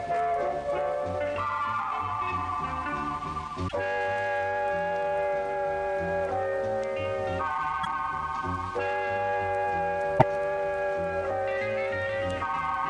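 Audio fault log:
3.67–3.73 s, 7.83–7.87 s, 10.18–10.23 s: broken MP3 bit reservoir. The sound jumps ahead with a brief chirp or noise burst of about two 26.1 ms frames, likely from frames missing before each point.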